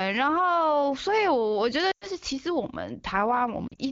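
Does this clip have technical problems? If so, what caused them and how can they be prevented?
Yes. Lost AMR speech frames cause two faults. From 1.91 to 2.07 s, about 100 ms of speech (five 20 ms frames) drops out. The decoder repeats the last good pitch and vocal tract settings while lowering the gain, so the sound smears and fades toward silence. From 3.67 to 3.80 s, shorter losses of up to 40 ms cause brief warbles. An abrupt dropout or click would cut off sharply. Here, each loss stretches out the last sound and fades it, because the decoder is filling in the missing frames. The AMR wideband (HD Voice) codec at 15.85 kbit/s adds only light coding colour. Prevention: improve the radio link or use stronger error protection so that frames pass their checksum.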